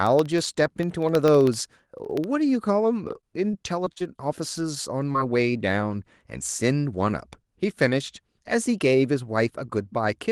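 From 0.07 to 2.24 s, regular ticks sound every 64 ms, about forty in all: periodic USB or driver dropouts, each losing roughly a tenth of a millisecond to silence. Between 3.21 and 4.02 s the sound turns choppy and robotic, the result of repeated packet loss: five gaps, the longest 41 ms, patched by stretching the preceding audio. At 5.12 to 5.16 s a brief smear marks short concealed packet loss, where about 20 ms never arrived and the Opus decoder filled it by extending the last sound.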